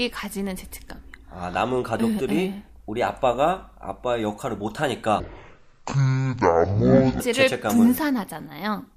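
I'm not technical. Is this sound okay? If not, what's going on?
No. Stereo read as mono, 5.2 to 7.2 s: the two channels get read as one stream, so the speech plays at half speed and an octave lower.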